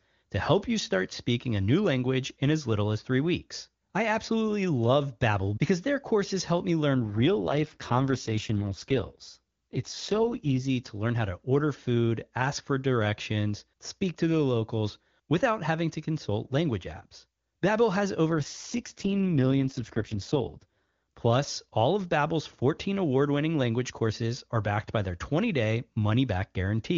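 At 6.94 s the speech suddenly goes rough and a bit synthetic, and it stays that way until 10.69 s. Then the same thing happens again from 18.30 to 20.91 s. That's an AMR rate drop. The link looks to have pushed the wideband codec down from around 23.85 kbit/s to its 6.6 kbit/s floor, spending bits on protection. The bandwidth holds and nothing cuts out, but the voice turns raspy until the rate recovers and the clean HD Voice sound returns.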